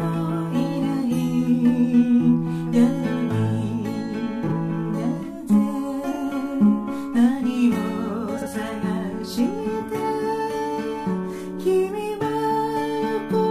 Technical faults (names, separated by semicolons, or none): frames out of order